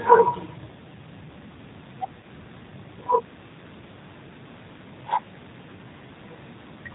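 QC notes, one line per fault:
throughout: G.729 codec. Speech sounds rough and slightly synthetic with nothing above 4 kHz, as an 8 kbit/s pulse-coded model rebuilds each frame.
2.21–2.26 s: VoIP packet loss concealed by the speech codec. A brief stretched, fading sound, then weak or distorted sound while the decoder extrapolates across a 20 ms gap and recovers.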